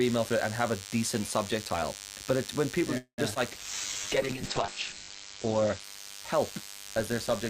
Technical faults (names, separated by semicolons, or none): DECT cordless phone buzz; call audio freeze; short concealed packet loss; call bitrate drop